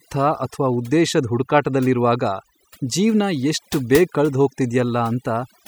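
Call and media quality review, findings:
Overdone noise removal, whole clip. Background floor dropped, with twinkling specks where isolated bands flicker on and off. Quiet low-level parts of the voice dropped along with noise. Probable component: noise suppressor set too aggressive, cutting individual frequency bands near its noise estimate. Unlike a noise gate, which silences everything at once between phrases, suppression here is band-by-band, hence the specks and the lost quiet parts of the voice.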